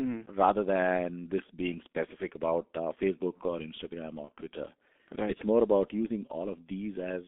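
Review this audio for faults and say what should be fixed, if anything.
The whole recording carries G.723.1 codec damage, and it is heavy. Energy sits only between about 250 Hz and 3.6 kHz, so the sound is muffled and hoarse, with smeared consonants, which fits the 6.3 kbit/s mode. The coder's slow, frame-based voice model blurs fast transitions. On a spectrogram, nothing appears above 3.6 kHz and the harmonics look coarse and smudged in blocks. Using a wideband codec such as Opus at a higher bitrate would avoid this.

At 4.25 to 4.31 s there is VoIP packet loss concealed by the speech codec. The gap fits a single lost 30 ms frame. The decoder repeated its last pitch and filter settings at falling gain, which gives a brief stretched, fading sound. The sound stays weak and off for tens of milliseconds after about 4.31 s while the decoder's state recovers. On a waveform this shows as a short fading stretch. 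On a spectrogram it appears as a frozen, fading patch. A jitter buffer with forward error correction or redundancy would prevent the dropout.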